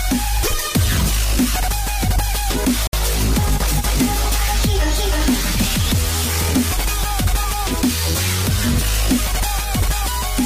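At 2.87 s the audio shows what is likely a Bluetooth stall: interference appears to have held up packets on the wireless link, so the headphones' buffer emptied before replacement packets arrived and playback had to pause. The sound cuts to silence for about 60 ms, until 2.93 s, then resumes, either where it left off or a little further on if queued audio was discarded during the wait.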